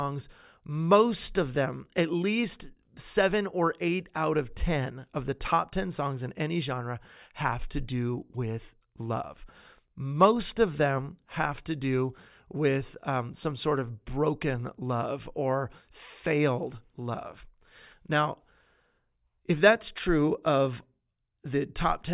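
Nothing goes wrong anywhere in this bit of speech, so there's no technical fault to point out.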